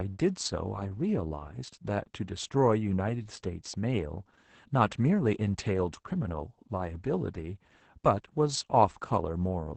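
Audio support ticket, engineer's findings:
Opus voice compression throughout: SILK coding at a rate consistent with about 10 kbps, band capped at 8 kHz; coarse excitation makes speech muffled, hoarse, slightly robotic.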